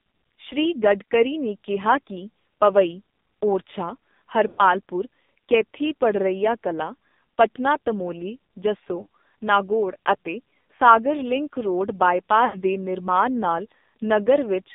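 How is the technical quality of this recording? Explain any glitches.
The technical quality is poor. The speech has narrowband, heavily coded mobile-call sound, with four brief dropouts.

The AMR narrowband mobile codec runs throughout. Its low-rate vocal-tract model, around 6 kbps, makes the speech buzzy and synthetic. A spectrogram shows nothing outside roughly 200 Hz to 3.7 kHz.

Lost AMR speech frames occur at 4.48–4.64 s, 9.02–9.07 s, 10.76–10.80 s and 12.46–12.62 s, the longest lasting about 100 ms. The decoder repeats its last good settings with falling gain, so each gap smears and fades. The waveform shows short tapering envelope dips.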